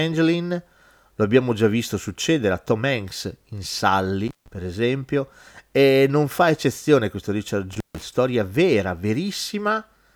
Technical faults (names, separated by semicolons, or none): intermittent contact